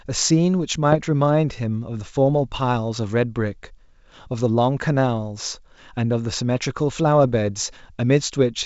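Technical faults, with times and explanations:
0.92–1.01 s and 7.24–7.36 s, bit errors on an ADPCM link: Two short rough bursts break into the speech, with pops and a brief change in level. The error rate is low, well under one percent. Each flipped bit corrupts more than one sample. It also throws off the decoder's step size and predictor. So the damage rings on for several milliseconds before the decoder recovers. The wideband G.722 sound stays clear around both bursts.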